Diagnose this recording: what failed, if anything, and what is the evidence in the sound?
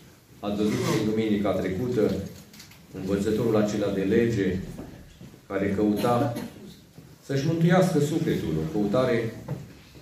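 Nothing in the signal points to a failure at any stage of the chain, from the analogue side through conversion and buffering to storage and playback.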